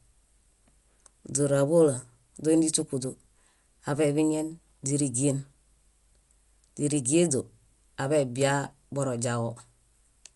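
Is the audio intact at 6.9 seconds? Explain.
No. At 6.9 seconds the speech carries the same damage heard for the whole clip, which is Dolby Digital compression, likely at a low rate near 64 kbps. Nothing is heard above about 11.4 kHz, so the speech sounds dull. The encoder narrowed the band to save bits. Many frequency lines got no mantissa bits and were filled with dither noise on decoding. That leaves a rough, fluttering noise clinging to voiced tones.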